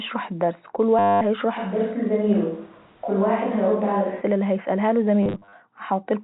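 From 0.99 to 1.21 s the speech turns into a robotic stutter with a steady buzz near 100 Hz. This is packet loss with the last packet repeated: 220 ms went missing and the receiver looped the final packet, which fits 10 ms packets.

From 1.59 to 4.2 s the speech turns suddenly roomy and hollow, thinner in the bass, with room noise about 30 dB below it but little change in level. The likely cause is a switch to a distant microphone after the close one dropped out.

Between 5.23 and 5.53 s the same kind of repeated-packet loss returns, this time scattered. About 200 ms of audio is lost over 300 ms in short gaps of up to 40 ms, giving brief stutters rather than one continuous buzz.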